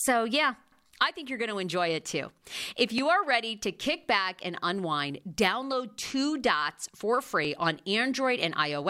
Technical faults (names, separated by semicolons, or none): clock drift buffer slips